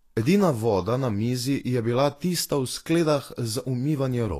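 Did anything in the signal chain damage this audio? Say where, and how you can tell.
Yes. The damage is at the codec stage: this speech was likely encoded with Vorbis compression at a low quality setting. Throughout the clip there is nothing above 14.2 kHz. The remaining treble is hissy and grainy, tones sound roughened, and consonant onsets are smeared. At this quality the encoder keeps only a coarse outline of the high band and replaces its fine detail with noise of similar energy. The level of damage points to a bitrate around 35 kbps.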